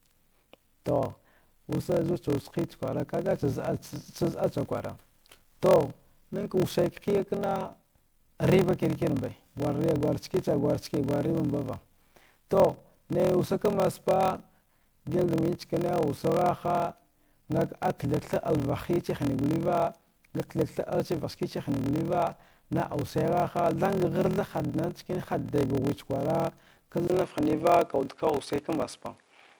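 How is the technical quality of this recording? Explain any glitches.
The recording has clear technical problems: two run through the whole clip, and a third appears near the end.

Generation loss is present throughout. The speech sounds swirly and hollow, with smeared consonant attacks, more degraded than a single 128 kbit/s MP3 would explain. The likely cause is that the audio was decoded and re-encoded as MP3 around seven times. Each pass quantised the signal on a shifted frame grid, so the noise and gaps built up. On a spectrogram, the upper bands show patchy holes.

A padded block size mismatch also runs throughout. One stage wrote 1024-sample blocks, but the next read larger ones of about 1152 samples. The shortfall in each block was filled with zeros. Those repeating gaps produce a steady 41.7 Hz buzz under the speech, and the playback runs at 0.889 times normal speed while the pitch stays about right. 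On a waveform, this shows as a regular comb of tiny flat dropouts. On a spectrogram, it shows as vertical striping.

Starting at 27.07 s and lasting to the end, the input is likely switched to a poorer device. A silence of about 20 ms marks the switch. After it, the sound turns dull and boxy. The band narrows, and the level shifts by roughly 5 dB. A new noise floor sits about 45 dB below the speech. On a spectrogram, the top of the band abruptly disappears at the switch. On a waveform, there is a brief flat gap followed by a change in amplitude.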